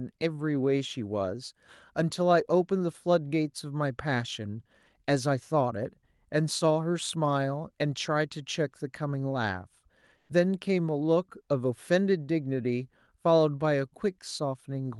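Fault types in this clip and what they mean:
Comfort noise in place of the background: from 10.17 to 10.29 s, for about 120 ms, the quiet room tone between speech, sitting about 47 dB below the loudest passages, turns into a flat, featureless hiss at the same level. This is likely discontinuous transmission in the Opus codec. With no speech detected, the sender paused, and the receiver filled the gap with synthetic noise matched to the background's rough spectrum until real audio resumed.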